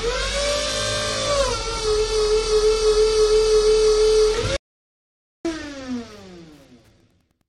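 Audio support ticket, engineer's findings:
Audio dropout to silence, 4.57–5.45 s (about 0.88 s lost): hard cut to silence, no room tone. Likely input link loss or mute upstream of recorder, not gating or fade.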